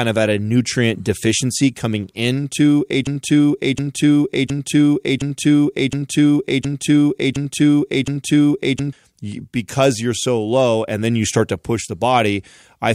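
From 3.07 s to 8.93 s the speech stops moving forward and a single fragment of about 0.72 s plays again and again, back to back, eight times with identical timing, like a needle stuck in a groove. This broken-record loop most likely comes from the player, encoder or stream stalling and resending the last fragment it held, so the speech that belonged in those six seconds is missing when playback resumes.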